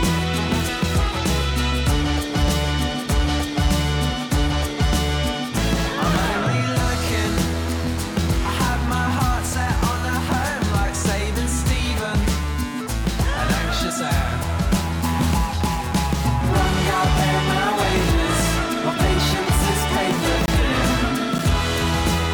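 At 20.46 to 20.48 s and again at 21.38 s, blocks of digital silence about 22 ms and 9 ms long cut the sound abruptly, likely from an unfilled output buffer. Each shows as a flat, near-silent stretch in the waveform and a vertical gap with broadband edge streaks on a spectrogram.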